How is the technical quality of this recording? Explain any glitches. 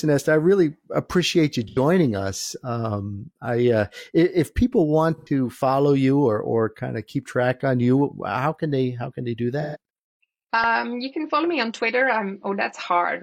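The recording has three short glitches from AAC frame loss with concealment, at 1.68, 5.18 and 9.61 s. Each time the decoder papered over about 85 ms, two lost frames (128 ms for the third, three lost frames), by reusing the last good spectrum, leaving a brief smeared, phasey blur in the speech.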